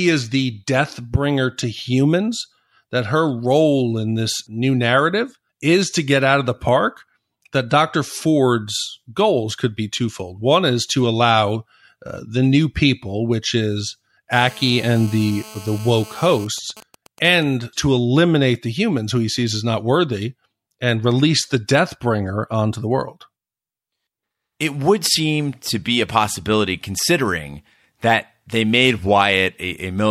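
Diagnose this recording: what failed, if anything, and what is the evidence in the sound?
GSM phone buzz enters at the analogue stage. From 14.33 s to 16.45 s a hard, raspy buzz sits under the sound, about 20 dB below it. Its fundamental is 217 Hz, with a dense stack of harmonics, and it bears no relation to the programme. It holds nearly steady. A nearby 2G phone in a call is transmitting bursts 217 times a second. Unshielded wiring or an input stage rectifies that radio energy into audible pulses.

GSM signalling bursts follow at the same analogue stage. From 16.46 s to 17.43 s the steady buzz breaks into even ticks with a longer 217 Hz buzz twice a second, at a similarly low level. The timing points to the same phone still in its call while its user falls silent. The handset then transmits only sparse groups of bursts instead of a continuous train. The circuit rectifies each group, so the interference arrives as intermittent clusters.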